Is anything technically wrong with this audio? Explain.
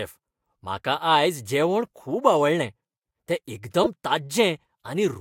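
Yes, one glitch. Right after "जेवण खूब आवडलें तें", at 3.84 to 3.87 s, there's a corrupt frame decoded: a few damaged compressed frames got played anyway, putting energy at the wrong frequencies. You hear it as a fairly loud, brief chirp, squeak, blip or burst of noise.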